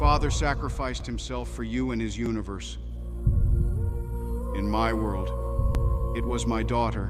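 At 1.00 s, 2.26 s and 5.75 s there is a repeated buffer. Fresh audio arrived late, so the last block played once more. Each repeat lasts about 11 ms, which fits a 512-sample buffer. Each is heard as a brief click with a hard join.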